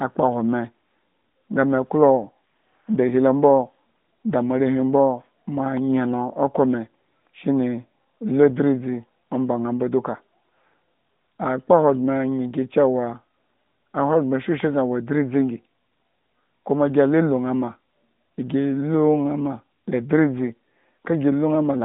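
No faults: the speech sits in an ordinary AMR-NB narrowband mobile channel, roughly 150 Hz to 3.7 kHz, with nothing above 3.8 kHz and only light coding marks.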